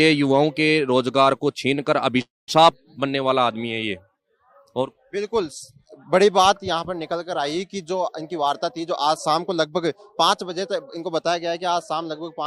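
At 2.21 to 2.50 s a call audio freeze leaves a short fading buzz, then about 200 ms of silence, likely from a jitter buffer that ran empty; the spectrogram shows a brief smear, then a blank gap. From 8.22 to 11.07 s a jitter buffer speed-up plays the audio at about 109% speed with pitch unchanged, cutting roughly 0.3 s; the waveform shows events spaced more tightly.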